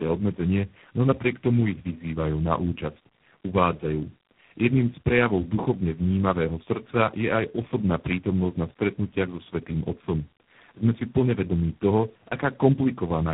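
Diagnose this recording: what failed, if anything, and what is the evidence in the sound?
The fault is at the codec stage: tandem speech coding, present for the whole clip. The speech has a stacked roughness, muffling and warble that no single coder would leave, and nothing is heard above 3.9 kHz. That fits three speech codecs in a row, two 8 kbit/s G.729A passes and then 24 kbit/s G.726, with G.711 links between them. Each stage re-encodes the previous one's errors. A single low-bitrate codec would leave milder, more uniform artefacts.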